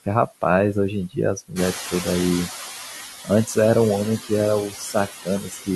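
Noise suppressor artifacts run through the whole speech clip. The suppressor pulls down the steady background by about 9 dB, frame by frame. Between phrases the noise sinks. Under the speech it swells back up.

At about 1.5 s the room noise jumps by about 14 dB. It then sits only about 9 dB below the speech. From 1.55 to 2.65 s the noise suppressor is catching up. Its noise estimate still reflects the quieter room. So the louder noise comes through with little reduction at first. Over about 1.1 s the estimate adapts. The noise then sinks by about 8 dB.

Speech cut by the noise suppressor appears three times. From 1.73 to 2.06 s the level drops by up to about 13 dB. This happens while the suppressor is still adapting. Around a tenth of a second of speech is affected. From 4.7 to 4.95 s a shorter stretch drops by about 9 dB. From 5.23 to 5.69 s the deepest cut comes, about 16 dB, over roughly a third of a second. 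In each case quiet speech was mistaken for noise. The soft sounds come out swallowed and faint.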